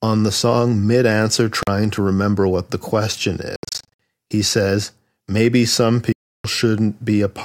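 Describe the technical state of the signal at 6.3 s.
At 6.3 s the signal sits inside a gap of silence running from 6.13 s to 6.45 s, roughly 0.32 s long, with abrupt or briefly faded edges. The speech resumes as though it had kept playing underneath, so that stretch is missing rather than paused. This is likely a Bluetooth dropout: audio packets reached the headphones too late and were discarded, and the output stayed silent until valid packets arrived. The length points to a run of around twenty lost packets.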